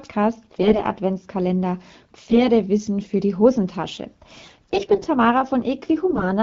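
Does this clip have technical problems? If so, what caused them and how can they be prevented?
Yes. AMR bit errors at 0.50–0.83, 2.17–2.45 (just before "für die"), 4.43–5.06 and 6.10–6.23 s: corrupted low-priority frame bits misplace excitation pulses, making the speech hoarse and gargly. Improving radio coverage or channel protection prevents it.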